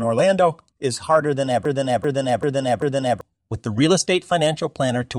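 After "is harder than", from 1.65 to 3.21 s, a broken-record loop replays one 0.39 s fragment four times, likely from a stalled stream resending its last buffer. Unlike echo, every pass is identical and unfaded, and the skipped speech never returns before "with the".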